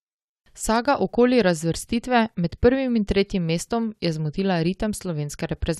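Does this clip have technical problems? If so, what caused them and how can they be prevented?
No, no technical faults detected.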